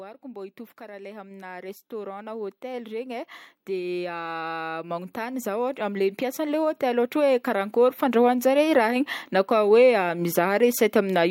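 Speech recording with automatic gain rising from 0.21 s to 8.74 s: the gain control climbs about 20 dB, lifting voice and background together in a slow swell.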